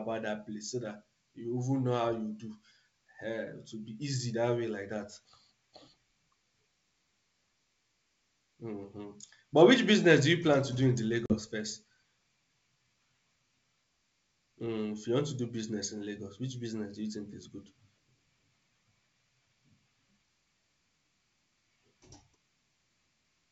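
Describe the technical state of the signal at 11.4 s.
Packet loss on an ADPCM call, 11.26–11.38 s, after "to do in the": a hard-edged 40 ms silence, roughly two packets. The desynchronised adaptive predictor then brings speech back briefly distorted.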